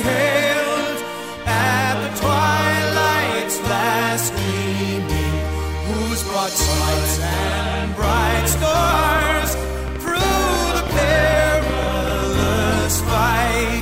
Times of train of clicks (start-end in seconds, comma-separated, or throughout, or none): 8.16-12.71